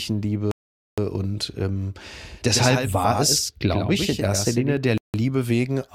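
At 0.51 s the speech drops into silence and picks up at 0.98 s exactly where it left off, a rebuffering stall: playback ran dry and waited for more data, adding 0.46 s with nothing lost. From 2.05 s to 4.77 s a second, clean copy of the speech trails the first by roughly a tenth of a second, about 5 dB quieter, with no reverberant tail, and it cuts in and out abruptly. This doubled audio track likely comes from the same signal being captured twice along a slower path. A second stall interrupts the sound from 4.98 s to 5.14 s, then resumes seamlessly, adding 0.16 s.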